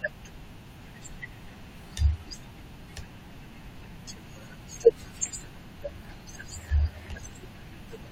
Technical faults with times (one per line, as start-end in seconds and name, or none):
none